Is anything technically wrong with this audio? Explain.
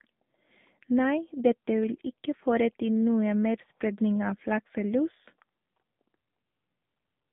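Yes. Throughout the speech, the sound carries AMR narrowband mobile codec damage. The codec works at 8 kHz sampling and rebuilds the voice from a vocal-tract model fed by a few pulses per 5 ms subframe, and here the line passes only about 150 Hz to 3.6 kHz. The result is thin, boxy and plainly buzzy-synthetic, which fits a low rate near 7.4 kbps. A spectrogram shows a hard ceiling near 3.6 kHz and an empty band below 150 Hz.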